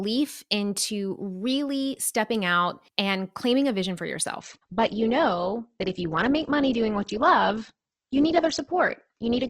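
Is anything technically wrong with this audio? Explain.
Yes. At 4.40 s, just after "claiming a vision for", an adaptive stream at a lower bitrate takes over for the rest of the clip. A slowed connection forced a leaner encoding, one that sounds near 12 kbit/s, so the audio turns dull and grainy with no gap. A spectrogram shows everything above 8.2 kHz stopping abruptly there, while the waveform continues unbroken.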